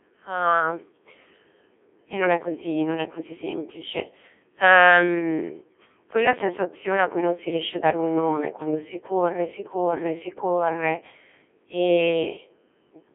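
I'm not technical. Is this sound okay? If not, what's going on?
No. From start to finish the speech sounds robotic and buzzy, thin and telephone-like, and heavily damaged. This is the Codec 2 vocoder, a very low-data system built for digital radio. It doesn't send the actual sound wave. It sends only a rough sketch of pitch, loudness and tone colour, and the receiving end rebuilds the voice from simple tones. Much of the natural texture is lost, which gives the mechanical quality heard throughout.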